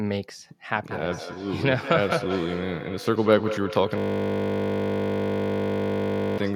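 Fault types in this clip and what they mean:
Feedback echo between two devices: two devices in the same room were on one call, so one played back the other's microphone feed, which that microphone then picked up again, and neither echo canceller could remove sound from the other device. From 0.9 s to the end, the speech returns roughly every fifth of a second, thinner and more ringing with each pass, peaking at about 9 dB below the direct speech.
System hang loop: the computer or driver froze while the audio hardware kept cycling through the same small ring buffer, which points to a buffer of about 20 ms. From 3.98 s to 6.38 s, one 20 ms fragment repeats exactly, 120 times in a row, heard as a steady 50 Hz buzz rather than speech. Around two seconds of real audio are lost underneath it.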